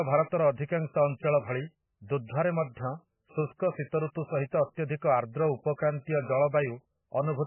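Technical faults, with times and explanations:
Throughout, MP3 compression: the speech has nothing above 3 kHz and a heavy watery, swirling quality, likely from an encoder starved of bits, as at a very low bitrate, cutting the treble and switching weak frequency lines on and off between frames. That flicker, not just dullness, distinguishes it from a plain low-pass filter.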